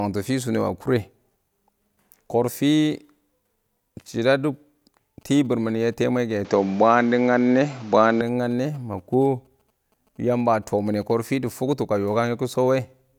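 From 6.45 to 8.21 s the input was likely switched to a poorer device. The speech loses everything above 7.6 kHz and turns duller, its level shifts by about 5 dB, and a faint new background noise appears. There is no gap at either switch.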